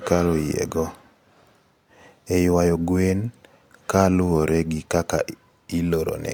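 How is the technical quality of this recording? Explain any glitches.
The technical quality of this recording is sound, with no glitches to explain.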